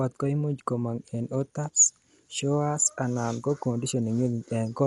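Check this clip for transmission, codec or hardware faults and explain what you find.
There's one fault, and it runs through the whole speech clip: likely Dolby Digital compression at a low rate, which fits about 64 kbps. Nothing comes through above 11.6 kHz, and starved frequency lines get filled with dither noise, so it sounds dull, with rough, fluttering grit around tones.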